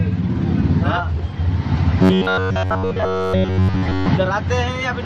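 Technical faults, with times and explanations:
2.02 to 4.10 s, robotic sound from repeated short buffers: fresh audio is likely reaching the playback stage too slowly, so the software keeps replaying the last fragment it holds, one of about 10.7 ms, and discards the real audio it misses. Around seven tenths of this stretch is filled this way. Each identical repeat imposes its own period on the signal, turning the sound into a rigid, metallic buzz fixed at 93.8 Hz that only loosely tracks the original contour.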